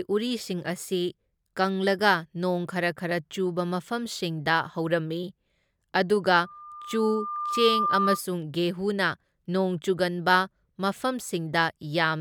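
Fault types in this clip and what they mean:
Loudspeaker feedback squeal: the microphone is picking up the loudspeaker it drives, and at about 1.2 kHz the loop gain has passed one, so that frequency feeds on itself. From 6.43 s a pure tone rises out of the speech over roughly a second and a half, ending a few decibels above it, and stops at 8.21 s. Its growth from nothing distinguishes it from a steady interfering tone or hum, which would sit at constant level.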